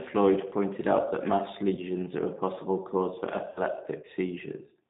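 Throughout, the speech sounds narrow, slightly rough and synthetic, with nothing above about 3.7 kHz or below 150 Hz. This is the G.729 codec at 8 kbit/s, which rebuilds each 10 ms frame from a vocal tract filter, pitch predictor and a few pulses. From 1.75 to 1.80 s, after "pointed out that mass", and again from 3.52 to 3.62 s, after "a possible cause for", the sound smears into a fading buzzy tone or coloured noise and stays weakened briefly afterward. This is VoIP packet loss concealed by the speech codec, which extends the last pitch and filter across about 20 ms and then 40 ms of missing audio.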